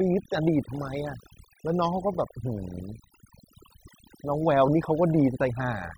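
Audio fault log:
Throughout: overdone noise removal. The background between phrases drops and breaks up into twinkling specks. A noise reduction stage set too strong is cutting individual frequency bands whenever they sit close to its noise estimate, taking quieter parts of the voice along with the noise.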